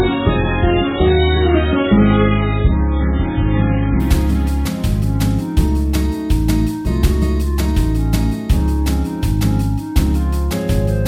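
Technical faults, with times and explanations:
0.0–4.0 s, adaptive stream starting at a low bitrate: nothing above 3.8 kHz and heavy codec artefacts, consistent with an opening MP3 stream near 8 kbit/s. At 4.0 s the player switches to a better rendition, likely around 128 kbit/s, restoring treble abruptly without any gap.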